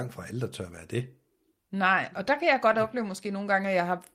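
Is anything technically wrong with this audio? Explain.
Yes. From 2.67 to 2.77 s there is a lost packet rebuilt from error correction. About 60 ms, likely three packets, was played from rougher, noisier low-bitrate backup copies.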